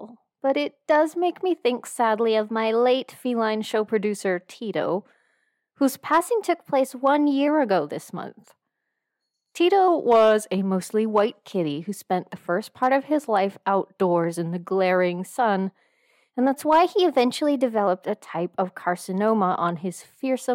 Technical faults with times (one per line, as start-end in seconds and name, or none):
2.20-3.13 drift correction step
6.20-7.48 drift correction step
9.88-10.58 drift correction step
16.53-17.87 drift correction step